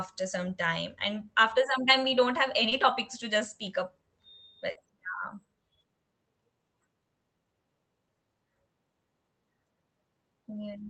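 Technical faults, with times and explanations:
2.69–2.73 s and 4.71–4.77 s, short concealed packet loss: about 20 ms and then 40 ms of audio arrived too late for the Opus decoder, which extended the preceding sound to bridge each gap. This is heard as a brief smear or wobble, longer at 4.71 s, before the audio returns.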